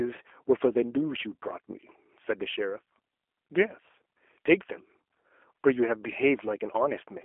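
G.729 codec coding runs from the start of the speech to the end. The encoder keeps only a vocal tract filter, a pitch predictor and a few pulses per short frame, then resynthesises the speech from them, which fits an 8 kbit/s codec. The band sits within a 300 Hz to 3.4 kHz line, with nothing above 3.5 kHz. The result sounds muffled and plainly rough and buzzy, with a synthetic edge.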